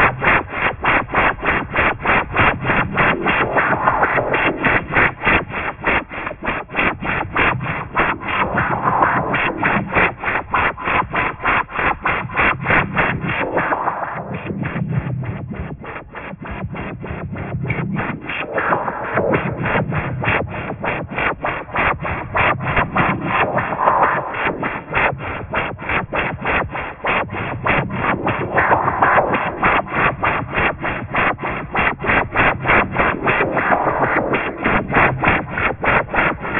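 A recording of everyday sounds with aliasing throughout: high content turns gritty and metallic, with false tones folding down about as loud as the real sound and energy packed hard against 3 kHz. This fits a drop from 48 kHz to 6 kHz without a low-pass filter first.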